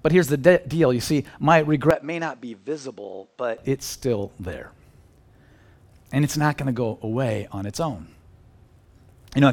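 Speech, with the input likely switched to a poorer device from 1.91 to 3.58 s, after "deal you see my." Nothing above 8.5 kHz, level drops roughly 10 dB, faint new noise floor, no gap.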